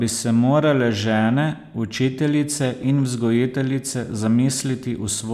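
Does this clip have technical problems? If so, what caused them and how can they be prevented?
No, nothing stood out as a technical problem on listening to this recording, so there is no cause to trace and nothing to prevent.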